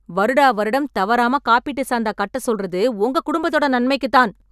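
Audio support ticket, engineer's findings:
Nothing to flag on this one: listened through the speech and didn't hear any problem worth chasing, so no action needed from our side.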